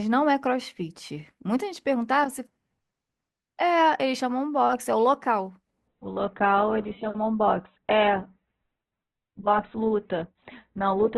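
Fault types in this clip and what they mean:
Adaptive stream at a lower bitrate: when the connection slowed, the player switched to a cheaper encoding of the same stream. From 5.88 s to the end, the speech loses everything above 4.1 kHz and takes on a thin, smeared texture, which points to a drop from about 64 kbit/s Opus to around 8 kbit/s. Unlike a dropout or packet loss, the audio never breaks or skips. The quality simply steps down at once and stays down.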